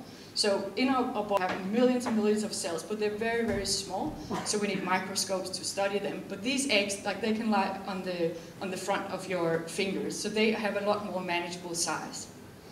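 At 1.37 s the audio jumps forward by about 300 ms, a case of compressed frames skipped. Roughly three consecutive frames of about 92.9 ms each never reached the output.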